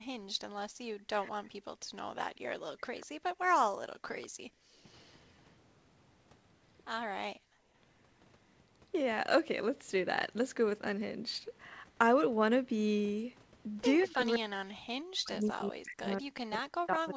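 From 0.0 to 0.34 s the room sound dips by about 35 dB for a brief moment. This is background gated by the echo canceller. It clamped the microphone while the loudspeaker played. Similar dips recur from 1.87 to 4.81 s, about 40 dB, and from 7.36 to 7.66 s, about 34 dB.

From 0.94 to 2.94 s the speech drops in pieces, by roughly 40 dB, for about a second in total. This is speech suppressed in double talk. Both sides likely spoke at once, so the canceller turned the talker down too. The same happens from 14.05 s to the end.

From 3.01 to 5.23 s a faint copy of the speech follows 197 ms behind, roughly 25 dB down. This is echo leak. The far end's canceller likely failed to remove its loudspeaker's output. A shorter scrap returns at 14.04 to 14.11 s, fainter still.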